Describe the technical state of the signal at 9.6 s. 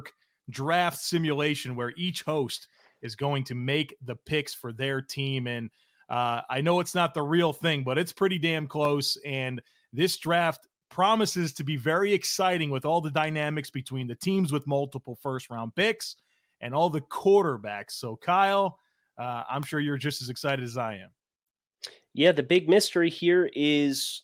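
At 9.6 s the speech signal is intact, with no audible fault at that point.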